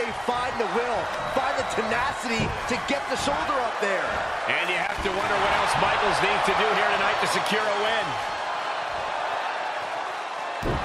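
From 4.79 to 5.24 s there is loose connector crackle: a worn contact keeps making and breaking, chopping the signal into an irregular scratchy burst. On a waveform it shows ragged gaps and spikes; a spectrogram shows scattered broadband vertical streaks across roughly half a second.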